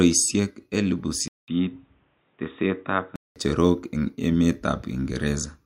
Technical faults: input switched to a poorer device

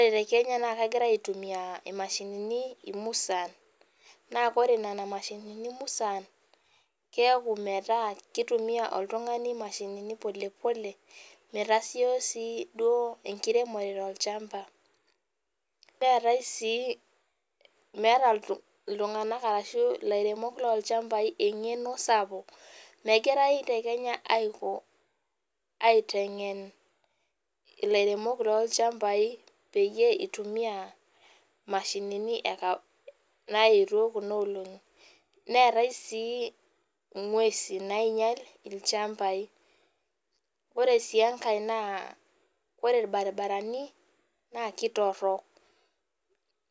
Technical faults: none

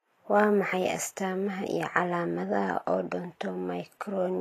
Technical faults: Vorbis compression

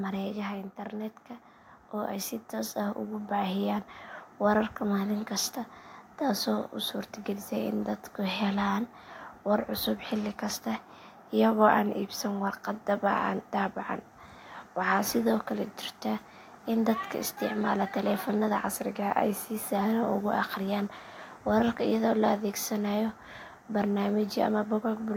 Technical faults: automatic gain falling; automatic gain rising

